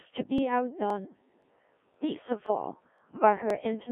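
Throughout, the speech passes through the Codec 2 vocoder at 1.3 kbit/s. Only pitch, voicing, energy and envelope survive, resynthesised from sine waves. It sounds robotic and buzzy, limited to 250 Hz–3.4 kHz.

Overlapping chunks cause a 20 ms repeat at 0.38, 0.90, 1.42, 1.94, 2.46, 2.98 and 3.50 s. Each chunk starts early, so the join replays, giving a regular stutter.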